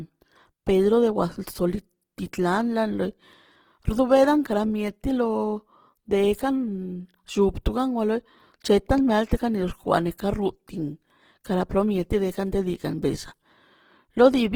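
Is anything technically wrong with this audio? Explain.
Yes. Throughout the speech there is plainly audible Opus compression damage. The sound is still fullband, with content reaching about 20.3 kHz. But the detail inside it is coarse. Tonal parts of the voice turn rough, grainy and noisy. This points to a low bitrate, around 16 kbps, and likely to an encoder working in its music (CELT) mode. That mode keeps each band's overall energy but fills bands it cannot afford with folded or noise-like content.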